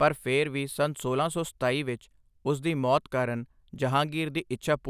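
No technical faults turn up anywhere in this recording; the speech just runs along without a hitch.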